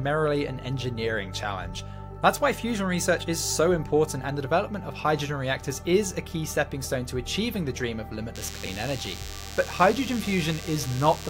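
A nearby DECT cordless phone or base station is transmitting short radio bursts every 10 ms, and the audio circuitry is rectifying them. This is DECT cordless phone buzz. From 8.35 s to the end of the clip, a thin, steady buzz at a 100 Hz repetition rate, rich in harmonics, sits under the sound at roughly 15 dB below it. Because it is a constant pulse train rather than hum, it sounds harsh and rasping.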